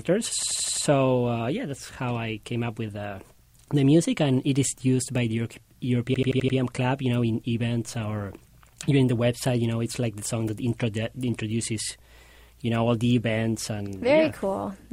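System hang loop at 0.43–0.85 s and again at 6.14–6.57 s: the system stalled while the hardware kept replaying its ring buffer, so one 85 ms slice repeats five times, fitting a 4096-sample buffer, giving an 11.7 Hz machine-gun stutter.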